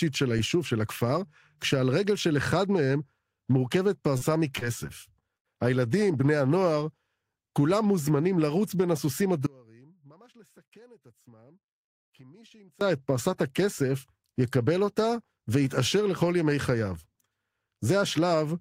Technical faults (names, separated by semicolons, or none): short concealed packet loss; audio dropout to a faint residue